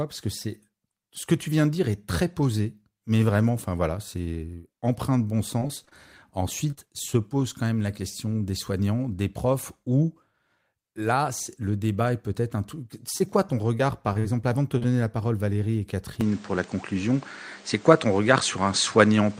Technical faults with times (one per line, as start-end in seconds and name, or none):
5.59-5.93 repeated packet loss (robotic sound)
6.71-6.88 short concealed packet loss
13.18-14.86 repeated packet loss (robotic sound)
16.21-19.39 input switched to a poorer device